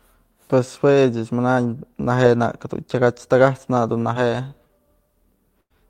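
At 4.13 to 4.17 s and again at 4.67 to 4.71 s the speech shows short concealed packet loss. Each time about 20 ms of audio failed to arrive in time, and the receiver synthesised roughly 17 and 19 ms of replacement by extending the preceding sound before crossfading back into the real signal. Both events are heard as a brief smear or wobble in the speech, with the lost fragment simply absent.

From 5.61 to 5.72 s a burst of packet loss removes about 100 ms. The concealment carried the last sound forward for roughly 89 ms while attenuating it, producing a held buzz or fading hiss in place of the missing material. Speech then resumes further along, and everything that fell inside the gap is lost rather than delayed.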